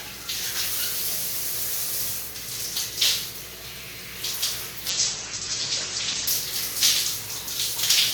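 From 4.91 to 6.33 s, a call bitrate drop starves the encoder. The coarse result suggests roughly 10 kbps instead of 64. The sound turns rough and watery, and its top end is cut from 20 kHz to 8 kHz for about 1.4 s.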